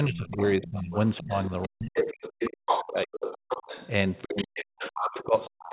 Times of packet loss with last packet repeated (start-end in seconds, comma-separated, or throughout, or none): none